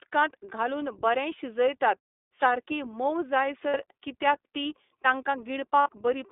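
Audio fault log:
Throughout, iLBC codec: the sound is confined to roughly 300 Hz to 3.6 kHz, and each 20 ms frame is coded independently at a low rate, consistent with the 15.2 kbps mode. This leaves the speech plainly rough and slightly synthetic, with no high-frequency air.
3.68–3.76 s and 5.82–5.89 s, lost iLBC frames: gaps of about 60 ms and 40 ms, consistent with three and two lost 20 ms frames. The decoder repeats the last pitch cycle blended with noise, producing a brief buzzy held vowel. Because the frames are independent, the voice is right again almost at once, the first time on "कित्याक ती".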